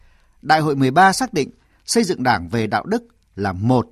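A short speech recording with no audible technical faults anywhere in the signal.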